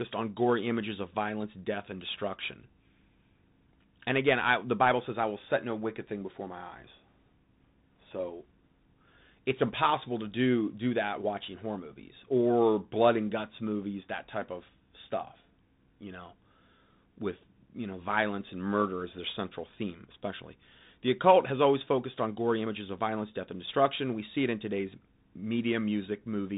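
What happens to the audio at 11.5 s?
The speech at 11.5 s passes through a Bluetooth CVSD headset codec, as throughout the clip, whose adaptive one-bit encoding sits in a narrowband path that passes nothing above 3.8 kHz, leaving s sounds scratchy over granular hiss.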